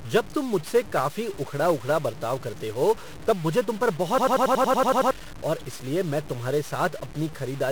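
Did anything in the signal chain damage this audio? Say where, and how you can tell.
Yes. At the sample-format conversion stage, the signal was likely truncated to very few bits without dither, which fits about 6 bits. Throughout the clip the speech carries grainy distortion that tracks the voice, with quantisation error only about 20 dB below the signal, so quiet passages turn gritty.

At the codec stage, 1-bit DFPWM compression, consistent with a 48 kbps stream, has done heavy damage across the whole clip. Each sample only nudges an adaptive level up or down, so the speech sounds fuzzy and crackly, and the treble disappears under broadband hiss.

In the driver or buffer stage, a system hang loop runs from 4.18 to 5.11 s. The host stalled while the hardware kept replaying one 92.9 ms block, which fits a 4096-sample buffer. It repeats ten times as a 10.8 Hz machine-gun stutter, and about a second of real audio is lost.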